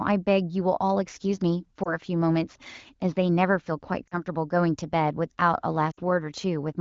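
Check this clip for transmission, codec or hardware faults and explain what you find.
Three short dropouts from lost AMR speech frames, at about 1.83 to 1.92 s, 4.07 to 4.14 s and 5.91 to 6.00 s. Each gap fits one, two and then three lost 20 ms frames. The wideband decoder covers each one by repeating the last good pitch and vocal tract settings at falling gain. That gives a quick warble that grows into a drop to near silence by the third, with the speech returning weak or rough for a moment.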